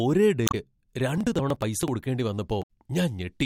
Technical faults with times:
0.45-0.55 damaged data in a compressed stream
1.18-1.88 processor overload crackle
2.59-2.69 damaged data in a compressed stream

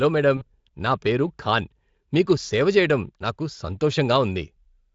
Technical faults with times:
0.37-0.44 VoIP packet loss concealed by the speech codec

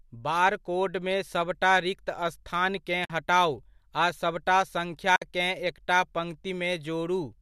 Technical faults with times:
3.04-3.10 AAC frame loss with muting
5.16-5.22 AAC frame loss with muting

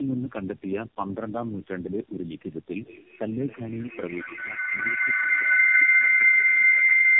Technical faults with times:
0.00-7.19 tandem speech coding

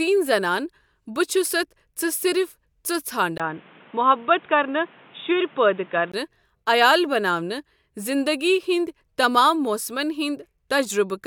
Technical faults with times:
3.38-6.14 input switched to a poorer device

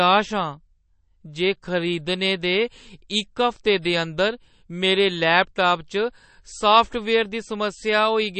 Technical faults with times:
0.00-8.39 MP3 compression

